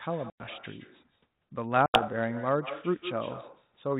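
Throughout the speech, echo with no canceller: the far end's loudspeaker feeds its microphone, returning every phrase around 150 ms later, about 12 dB quieter and thin. At 0.30 to 0.42 s and 1.86 to 2.02 s, packet loss on an ADPCM call cuts hard 100 ms and 80 ms holes, each fitting a few lost packets. The decoder's predictor loses step with the sender's, so the speech resumes slightly distorted before settling. The band-limited, narrowband sound fits 32 kbit/s G.726 ADPCM.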